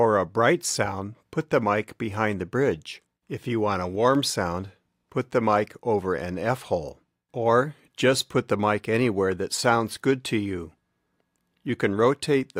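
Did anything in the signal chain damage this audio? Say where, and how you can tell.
No, nothing in the signal chain damaged this audio.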